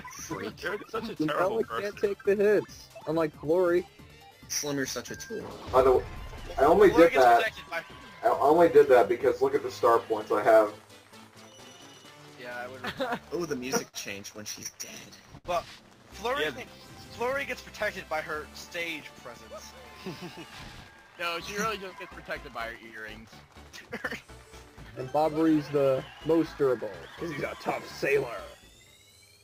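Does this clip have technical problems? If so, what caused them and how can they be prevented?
Yes. Repeated stalls (stutter) occur from 13.47 to 15.46 s. Packets arrived late or slower than playback, so the jitter buffer ran dry six times. Each time the receiver stretched the last sound to bridge the wait. About 153 ms was filled this way, roughly 8% of that span, with the longest gap at 71 ms. Nothing was lost, but the audio hitches and drags. A steadier network path with less queuing delay, or a larger minimum buffer target, would prevent this.

A jitter buffer slow-down runs from 14.71 to 17.34 s, overlapping the end of the stutter. With the buffer depleted, the receiver rebuilt its reserve by repeating single pitch periods and bits of pauses. This added 72 ms and played the audio at 98% speed with unchanged pitch, so sounds are faintly drawn out. Keeping the buffer from running low would remove the need for this recovery.

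A jitter buffer speed-up follows from 19.48 to 22.11 s. Delayed packets likely arrived in a burst and overfilled the buffer. To bring the delay back down, the receiver trimmed short pieces of one or a few pitch periods, about a tenth of a second in total. The audio plays at 104% speed at the same pitch. Smoothing bursty delivery, for example with traffic prioritisation for the audio stream, would avoid this.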